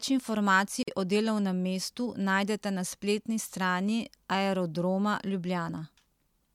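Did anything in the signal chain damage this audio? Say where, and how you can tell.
Yes. At 0.83 s the speech drops into a silence of about 46 ms, a gap at a join of encoded pieces: the codec stage added start delay and final-frame padding that were never trimmed. Speech resumes exactly where it stopped, so nothing is lost, unlike a network dropout.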